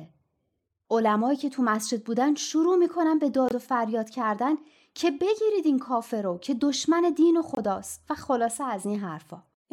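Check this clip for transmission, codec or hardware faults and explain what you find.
Two brief silences interrupt the speech, at 3.49–3.53 s and 7.55–7.58 s. Both are likely Bluetooth dropouts. A packet reached the headphones too late and was discarded, so output cut out, then speech resumed as if it had kept playing. Each gap fits one lost packet of about 23 ms.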